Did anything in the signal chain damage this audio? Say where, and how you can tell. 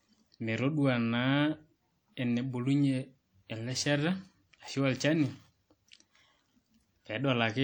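Yes. Throughout, the speech plainly rings and sounds washy, with hiss breathing with the signal. That points to the codec stage, likely WMA compression at a low bitrate, around 48 kbps.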